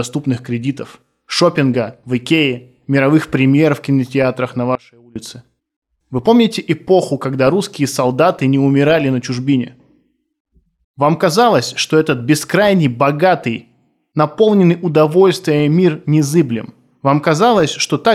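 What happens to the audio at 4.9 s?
At 4.75 s, right after "премьер в кинотеатрах на", the speech drops out until 5.16 s, a gap of about 0.40 s. It is an audio dropout to a faint residue: the speech falls to a weak leak roughly 25 dB below its normal level, likely because the signal feed broke while the path after it stayed live. Unlike a natural pause or a fade, the cut and the return are both abrupt, and the gap never reaches dead digital silence.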